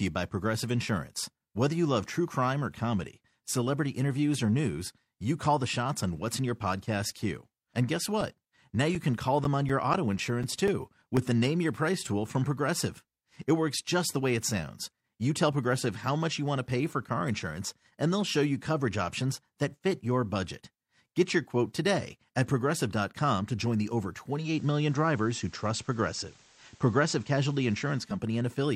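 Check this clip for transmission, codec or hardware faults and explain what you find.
Two faults turn up in this speech clip, one from a disc and one from broadcast reception.

CD scratch ticks run from 7.96 to 11.17 s: fourteen short ticks, about four a second, none longer than roughly 10 ms. A scratch wiped out more data than error correction could rebuild on each revolution, so the player patched those samples and left a regular tick.

Digital radio blending to analogue starts at 24.28 s, right after "to join the over". The receiver lost the digital stream and cross-faded over about 0.3 s to the FM broadcast. Hiss rises to around 30 dB below the signal, and the level shifts by about 1 dB. It blends back at 28.24 s.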